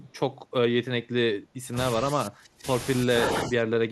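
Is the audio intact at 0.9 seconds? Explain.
Yes, at 0.9 seconds the speech runs through intact, with no dropout, click, distortion or other audible fault at that point.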